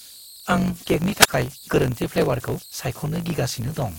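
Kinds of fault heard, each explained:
Converter idle tones, throughout: A delta-sigma converter running without dither slips into repeating bit patterns whenever the speech gets quiet, and those patterns turn into a whistle around 4 kHz that sits in the pauses and roughens the softest passages. The error sits at about 23 dB below the signal, and it comes back every time the level drops.
Block size mismatch (truncated), throughout: One processing stage hands over longer blocks than the next stage takes in, and the tail of each block is discarded. Every cut leaves a small discontinuity, and repeated at a steady rate they form a 50 Hz buzz running under the whole clip, which fits 1024-sample blocks being written. Because audio is lost at each cut, the speech plays 1.07 times fast while keeping roughly its normal pitch.
Wireless microphone squelch dropout, 1.20 to 1.28 s: The radio link of an analogue FM microphone weakens until the receiver's squelch shuts the output. 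Hiss swells briefly as the signal fades, then the sound falls into a near-silent hole lasting about 51 ms before the voice returns. The whole event passes in under a tenth of a second, which is why it comes across as a sharp gap in the speech.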